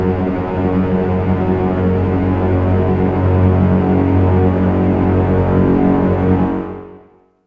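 No technical faults can be heard anywhere in this audio.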